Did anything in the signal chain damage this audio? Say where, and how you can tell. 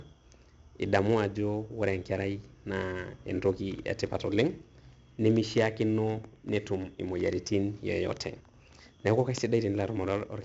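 Yes. 4-bit ADPCM compression runs throughout this speech, at the codec stage. A gritty hiss rides on every loud passage, and sharp attacks distort where the adaptive step can't grow fast enough. Nothing reaches above 7.8 kHz, which fits a 64 kbps stream at a low sample rate.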